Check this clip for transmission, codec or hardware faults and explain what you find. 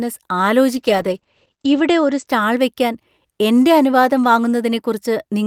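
One transmission fault shows up. From 0.74 to 2.33 s there's a call bitrate drop, 48 down to 12 kbps, bandwidth cut from 20 to 8 kHz, so the speech goes muffled and watery.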